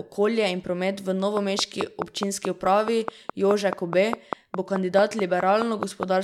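Something in the chain, likely interference from nearby equipment or a faulty connection, begins injecting a steady pulse at 1.37 s and keeps it up until 6.04 s. The result is a train of clicks: around twenty near-identical ticks at a regular pace of 4.72 per second, peaking roughly 15 dB above the speech. They sit on top of the talking and carry on through the pauses, giving a metronome-like popping that runs almost to the end.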